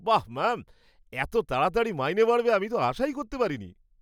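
No technical faults occur at any point in the recording, so there is nothing to describe in time order.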